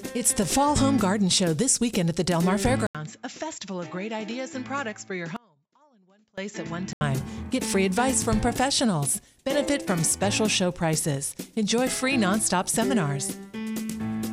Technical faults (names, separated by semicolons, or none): input switched to a poorer device; audio dropout to a faint residue